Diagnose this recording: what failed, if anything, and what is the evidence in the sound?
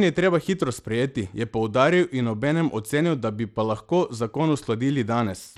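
The likely failure is at the codec stage, Bluetooth SBC compression running starved of bits, which fits a rate around 96 kbps. Throughout the speech, the upper sub-bands get too few bits, so treble flickers and drops away, and gritty quantisation noise and aliasing ride on the sound.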